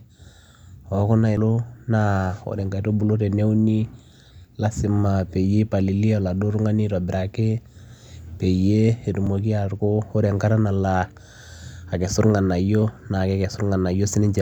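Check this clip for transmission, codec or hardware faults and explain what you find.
Two brief faults, both damaged data in a compressed stream, at 1.37 s and 9.26 s. Corrupted bytes there make the decoder misread frames and lose sync until it finds the next valid frame header, producing a short chirp or blip in the speech.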